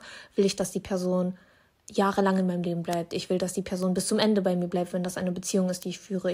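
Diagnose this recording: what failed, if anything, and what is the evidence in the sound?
Three bit error spikes cut through the speech at 2.93, 3.83 and 5.83 s. Each is a single bare tick, peaking near -9, -21 and -15 dBFS. A flipped bit in storage or on a digital link made two or three samples jump by a power of two, then snap back.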